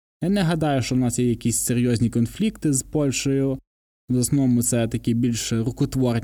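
No technical faults can be heard anywhere in this recording.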